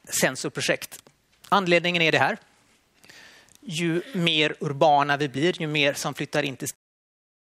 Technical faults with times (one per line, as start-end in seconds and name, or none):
none